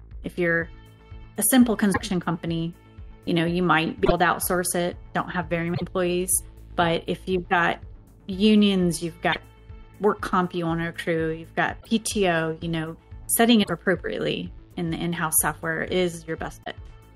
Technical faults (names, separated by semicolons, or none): broken MP3 bit reservoir